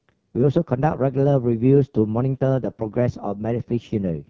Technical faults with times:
0.00-4.29 AMR wideband (HD Voice) codec

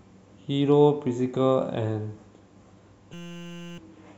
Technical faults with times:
3.13-3.78 system hang loop

